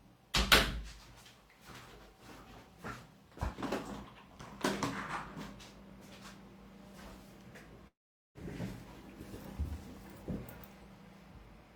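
At 7.87 s the sound breaks off in what is likely a long network dropout, with incoming audio stopping until 8.38 s. The receiver first extends the last bit of sound as a short buzzy smear that fades quickly, and then leaves about 0.43 s of silence. When the audio returns at 8.38 s it picks up further along, so about 0.48 s of the original is simply gone rather than delayed.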